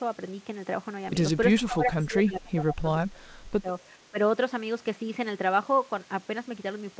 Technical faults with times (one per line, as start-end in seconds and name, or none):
1.55-3.69 speech suppressed in double talk
4.11-4.18 speech suppressed in double talk